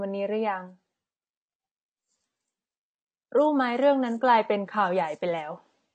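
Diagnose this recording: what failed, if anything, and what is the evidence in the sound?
Codec stage: the speech has nothing above 8.6 kHz throughout and sounds dull and smeared, with a warbling, fizzy edge on sibilants. The likely cause is AAC compression. The spectrum is quantised coarsely, the cut-off is lowered and bands are left with holes, which fits AAC-LC near 32 kbps.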